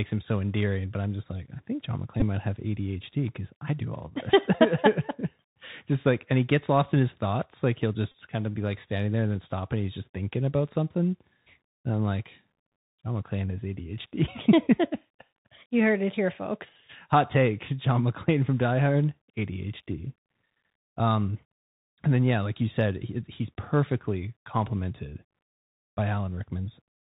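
A speech clip carried over a Bluetooth CVSD headset codec, which encodes one up-or-down bit per sample at a rate that fits 64 kbps. It cuts everything above 4 kHz, turns s sounds scratchy and leaves a granular hiss throughout. Bluetooth headset packets were also lost and repeated, with the last packet's bits decoded again at 2.20–2.24 s, just before "might have", and at 8.12–8.14 s, just before "kind of be like". Each repeat produces a brief buzz near 267 Hz.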